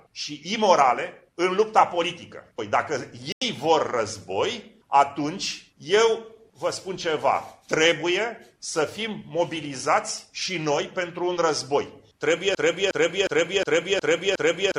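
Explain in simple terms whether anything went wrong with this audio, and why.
Two things go wrong here. At 3.32 s the sound suddenly drops out for about a tenth of a second, until 3.42 s. That's a corrupt frame muted: a chunk of compressed data got damaged, the decoder rejected it, and the player filled the gap with silence. The hole's length fits roughly two lost frames.

Then from 12.55 s to the very end, a piece about 0.36 s long plays over and over, six times back to back. That's a broken-record loop, likely from the stream or player stalling and resending the last bit it had, so the real ending is lost.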